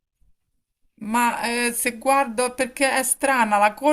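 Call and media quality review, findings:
No faults found: the speech signal holds steady level and continuity throughout, with no dropouts, distortion, timing irregularities or added noise audible in the recording.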